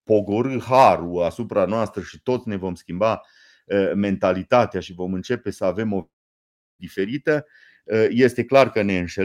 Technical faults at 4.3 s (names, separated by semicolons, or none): none